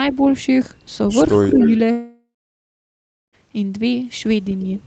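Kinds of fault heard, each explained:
Speech suppressed in double talk: Around 1.52 to 1.60 s the talker's level dips briefly. The drop is shallow, about 5 dB at its deepest. It affects only a short moment, well under a tenth of a second. The likely cause is an echo canceller facing both sides talking at once. It cannot separate the near voice from the loudspeaker echo, so it turns everything down together.
Echo leak: From about 1.55 to 1.71 s a faint delayed copy of the voice can be heard. It trails the original by 208 ms. It sits about 10 dB below the main speech. This is likely a far-end loudspeaker setup whose echo canceller missed part of what its microphone picked up. That leftover was sent back down the line.
Long network dropout: Starting at 1.91 s, about 1.42 s of audio never arrives. The receiver first stretches the last sound into a fading buzz. Then roughly a second of silence follows. 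Speech resumes at 3.35 s, picking up further along, and the lost portion is simply gone. A stall in the network is the likely cause, with the concealment covering the gap only briefly before giving up.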